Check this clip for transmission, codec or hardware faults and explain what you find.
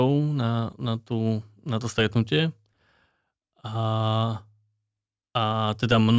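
No transmission, codec or hardware faults are audible anywhere in the speech.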